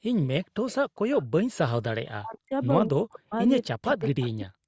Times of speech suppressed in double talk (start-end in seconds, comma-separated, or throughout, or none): 2.19-2.53, 2.88-3.33, 3.67-4.68